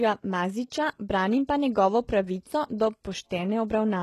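From start to finish, the s sounds come out gritty and metallic, the upper range has a synthetic sheen that doesn't quite match the lower voice, and nothing is present above about 12.3 kHz. The likely cause is heavy HE-AAC compression, at a level that fits a bitrate around 16 kbps: the treble is rebuilt by copying lower bands upward under a coarse envelope, so its harmonics fail to align with the real ones below the crossover.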